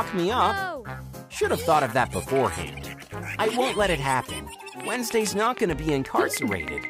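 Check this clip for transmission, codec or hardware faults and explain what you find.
One fault is present. From 4.80 to 6.85 s there is a train of clicks, about fifteen, evenly spaced at 6.4 per second. Each stands roughly 10 dB above the sound. They are heard as steady ticking. The likely cause is electrical interference or a struggling interface injecting repeated pulses.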